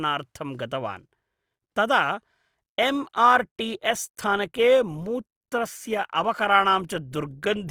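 From 2.73 s to the end, the speech drops abruptly to a lower-bitrate adaptive stream, roughly 64 down to 24 kbit/s Opus, so codec artefacts rise, with no gap.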